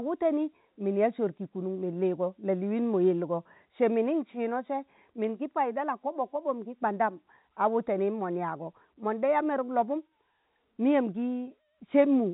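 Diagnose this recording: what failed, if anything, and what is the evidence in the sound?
Nothing has failed here: the speech sits in the narrow telephone band of G.711 coding, with no content above about 3.9 kHz, which is exactly how that path is meant to sound.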